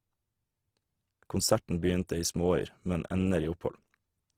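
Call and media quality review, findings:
Rough, grainy speech throughout; likely Opus compression, fits 16 kbps CELT mode filling starved bands with noise. Spectrogram: full bandwidth, few holes, upper harmonics hazy.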